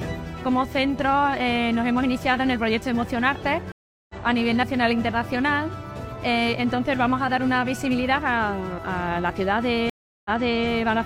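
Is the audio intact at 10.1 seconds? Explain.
No. A stream reconnect runs from 9.90 to 10.67 s. The connection dropped, leaving 354 ms of silence. A fresh decoder then restarted mid-stream, and the audio resumes 0.42 s earlier, replaying a stretch already heard. Its first moments come back muted or faded in.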